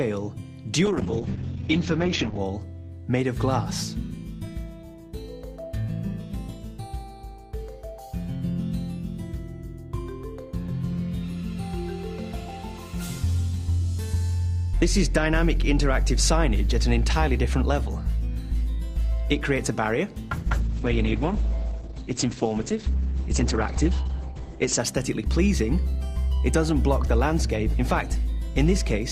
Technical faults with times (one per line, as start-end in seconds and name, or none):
0.86-2.45 call bitrate drop
20.37-24.85 call bitrate drop